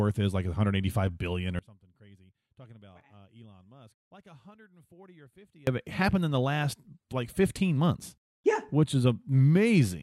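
At 1.59 s, right after "billion or", the speech drops out to a faint residue for about 4.1 s, returning at 5.67 s before "of it happened in". The cut is abrupt, leaving only a faint leak roughly 30 dB down, likely from the signal feed breaking while the downstream path stayed live.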